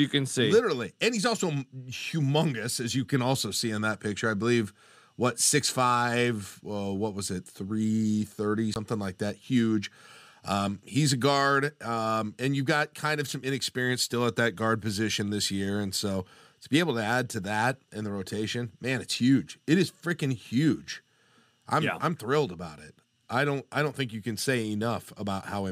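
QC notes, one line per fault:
8.74–8.76 s, Bluetooth stall. The speech drops out to silence for 20 ms, then carries on. The break is short and clean, with no fade on either side. This is likely a wireless dropout. Interference would have held up packets on their way to the headphones. Their buffer then ran empty, so playback had nothing to play until the resent packets arrived. That gap is the hole heard here.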